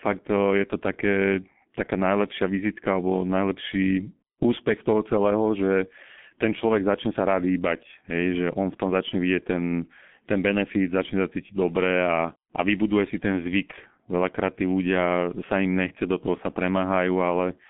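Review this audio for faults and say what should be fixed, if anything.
The whole recording runs through a G.723.1 codec, and it's heavily damaged. Nothing gets past about 3.7 kHz, the band sits near 150 Hz to 3.4 kHz, and the slow, coarse frame coding, which fits roughly 6.3 kbit/s, leaves speech muffled and hoarse with smeared consonants. Capture or route the call over a wideband codec at a higher bitrate instead.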